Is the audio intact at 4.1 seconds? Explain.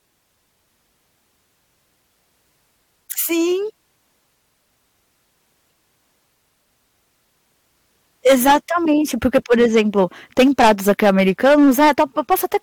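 Yes, the speech at 4.1 seconds is intact, with no dropout, click, distortion or other fault at that moment.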